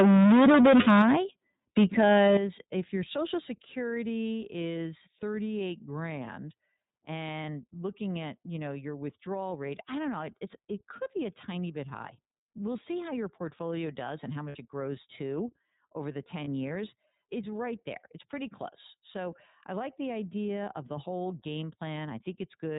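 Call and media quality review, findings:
iLBC codec, whole clip. Narrowband, rough, slightly synthetic timbre; spectrogram shows nothing above 4 kHz. 13.33 kbps with 30 ms frames, each frame's excitation coded independently. Codec damage plainly audible.

Microphone overload, 0.00–1.15 s and 1.77–2.37 s. Harsh crackle on loud syllables, about 14 dB over in the first span, about 4 dB in the second. Waveform tops flattened, roughly half the samples in the first span, about a sixth later. Likely cause: input gain set too high, peaks hitting converter ceiling.

Lost iLBC frames, 0.81–0.88 s, 14.48–14.56 s, 16.44–16.48 s. Brief held buzzy vowel, 60, 60 and 30 ms long, fitting two, two and one 30 ms frames. Decoder repeats last pitch cycle with noise; spectrogram shows flat repeated harmonics. Clean recovery immediately after.

Microphone volume stepped down at 1.02 s, 2.37 s and 3.39 s. Sudden level drop of about 10, 11 and 3 dB, voice and background together; waveform envelope steps down abruptly, the second right at the end of the clipped span. 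Cause likely automatic device input-gain reduction reacting to overload.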